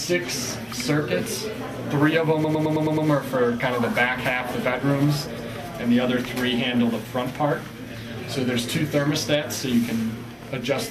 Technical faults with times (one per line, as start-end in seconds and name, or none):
2.43-3.07 repeated frames
5.37-5.50 repeated frames